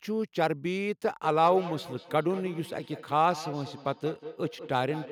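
From 1.23 s to the end, each stretch of speech comes back at an interval of about a fifth of a second. The repeats are thinner and more ringing, peaking at about 14 dB below the speech. This is feedback echo between two devices. A second device in the room replays the call, and this microphone captures it, so its own echo canceller never removes it.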